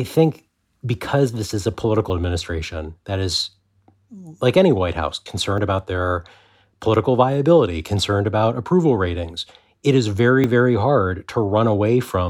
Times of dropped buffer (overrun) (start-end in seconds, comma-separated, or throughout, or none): 2.10, 5.58, 10.44